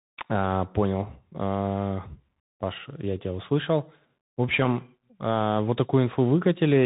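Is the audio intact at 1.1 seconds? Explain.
No. At 1.1 s the Bluetooth CVSD headset codec is at work, as it is across the whole clip. This codec codes speech one bit at a time, signalling only whether the waveform rises or falls by an adaptive step, at a rate that fits a 64 kbps link. Nothing above 3.8 kHz survives, so the speech sounds boxed-in, and the damage is plainly audible: steep, loud high sounds outrun the step and distort, s sounds turn scratchy, and a granular hiss sits underneath.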